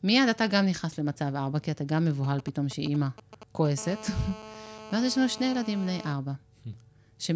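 From 2.24 to 3.67 s, GSM signalling bursts from a nearby 2G phone, rectified by the audio circuit, give galloping ticks and brief 217 Hz buzzes. These appear as clustered vertical striations roughly 15 dB below the speech level.

From 3.78 to 6.13 s, a steady GSM phone buzz sits about 17 dB below the speech. It is a raspy 217 Hz tone, seen as stacked harmonic lines on the spectrogram and a regular pulse train in the waveform.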